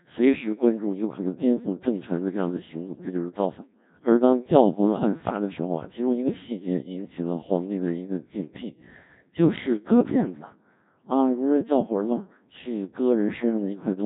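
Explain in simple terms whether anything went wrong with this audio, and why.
The speech has been through the Codec 2 vocoder from start to finish, and the damage is heavy. This digital-radio system keeps only a rough description of the voice, its pitch, loudness and tone colour, and rebuilds it at the other end from simple tones. That is why it sounds robotic and buzzy rather than just muffled, and nothing above 3.8 kHz survives. A telephone line or a normal compressed file would sound thin, but it would still sound like a real recording.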